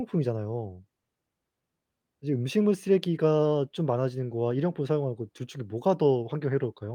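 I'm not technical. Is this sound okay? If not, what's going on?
Yes, nothing wrong can be heard in this recording.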